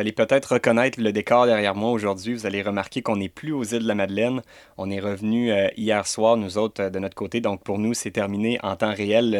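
Listening through this speech recording, nothing technical stood out at any point.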